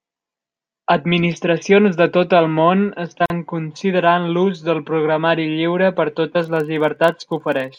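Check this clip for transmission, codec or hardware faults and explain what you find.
Two faults are present in this speech clip.

The first is a gap at a join of encoded pieces, from 3.26 to 3.30 s. Separately encoded segments were joined without trimming, so the encoder's start delay and end padding remain. This leaves a 43 ms gap whose edges are smeared, so the truly silent part is shorter. The speech then resumes where it stopped. The pieces appear to be 4 s long.

The second is a filter restarted on every block, from 6.40 s to the end. The filter drops its state at each block boundary and starts from silence. Each block therefore opens with a small transient. These transients form a 25 Hz buzz that rises and falls with the speech level.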